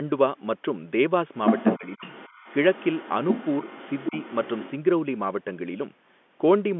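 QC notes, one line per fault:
1.44–2.56 s and 2.73–4.72 s, other side's voice leaking through: a second voice comes in under the talker. In the first stretch it's a bit louder than the talker. In the second it's much fainter, around 15 dB down. This is likely loudspeaker playback that the echo canceller didn't fully remove from the mic.
1.78–2.05 s and 4.10–4.16 s, speech suppressed in double talk: the talker ducks while that second voice is present. The first dip is deep, about 20 dB, with roughly a fifth of a second lost. The second is brief and shallower, around 10 dB. The canceller likely couldn't separate the two sides, so it pulled both down.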